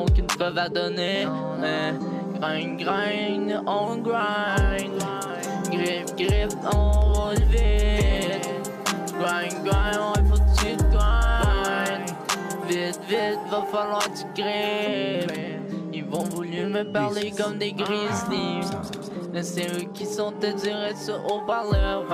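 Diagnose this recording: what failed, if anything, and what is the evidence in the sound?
Nothing in the signal chain failed: the sound carries no audible evidence of trouble at any stage from the analogue wiring through conversion, buffering, processing, transmission, storage or playback.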